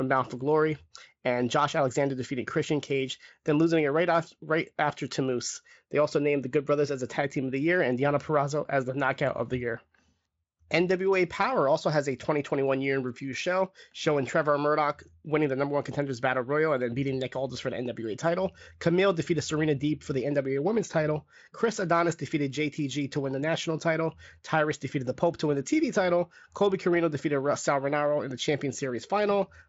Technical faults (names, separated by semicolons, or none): none